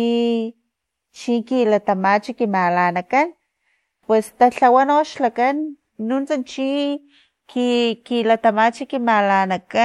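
No technical faults can be heard anywhere in this speech recording. The sound continues without interruption or disturbance from its opening moment to its last.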